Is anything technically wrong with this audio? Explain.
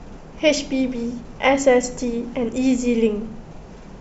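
No, nothing in this speech stood out as a technical problem on listening.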